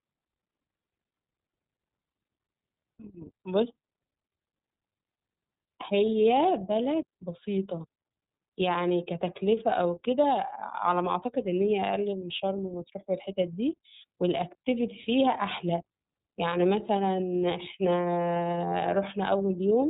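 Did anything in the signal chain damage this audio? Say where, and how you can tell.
Yes, at the codec stage: the whole speech clip has gone through the iLBC codec. Nothing survives above about 3.8 kHz, and there's a plainly audible rough, synthetic edge from each frame's excitation being coded on its own, which fits the 13.33 kbps mode with 30 ms frames.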